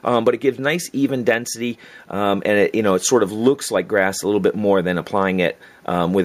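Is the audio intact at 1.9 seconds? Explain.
Yes, the audio at 1.9 seconds is intact, with no dropout, click, distortion or other fault to be heard at that moment.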